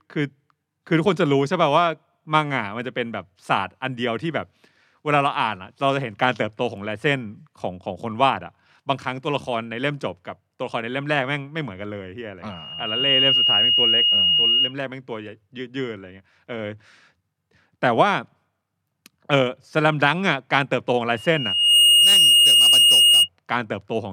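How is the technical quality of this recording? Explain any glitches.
The speech is marred by loudspeaker feedback squeal, twice: from 12.50 to 14.74 s and from 21.13 to 23.29 s. The microphone is hearing the loudspeaker it feeds, and at 2.9 kHz the loop gain passes one, so that tone feeds on itself. Each time a thin, piercing whistle swells over a fraction of a second, then sits about 5 dB above the speech in the first event and about 10 dB above it in the second.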